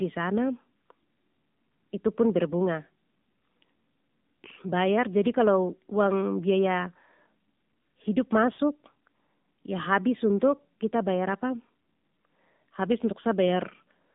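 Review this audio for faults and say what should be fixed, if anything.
The whole clip runs through the AMR narrowband mobile codec: speech squeezed into roughly 150 Hz to 3.7 kHz, with an obviously buzzy, synthetic edge that fits the low 7.4 kbps mode. To fix it, capture from a wideband or wired path, or at least push the AMR rate higher.

At 8.54 to 8.59 s there are lost AMR speech frames. The decoder smears the previous sound across a 40 ms gap, which fits two dropped 20 ms frames, and it comes back a bit rough. Better radio coverage or a more robust link would help here.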